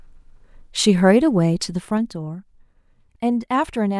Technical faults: zipper noise

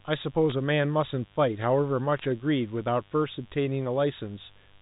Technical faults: mains buzz; bit errors on a digital phone line

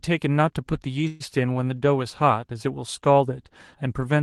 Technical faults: call audio freeze

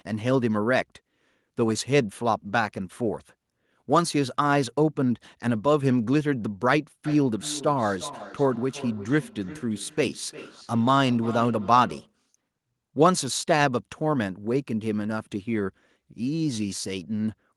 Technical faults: feedback echo between two devices

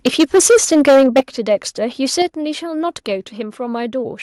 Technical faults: microphone overload; microphone volume stepped down

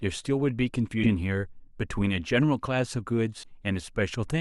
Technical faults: compressed frames skipped

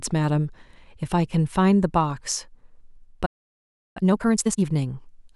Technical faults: playback stall; time-compressed catch-up

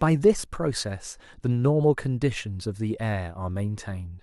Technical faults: none

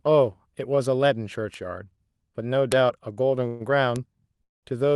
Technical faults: bit error spike; call audio freeze

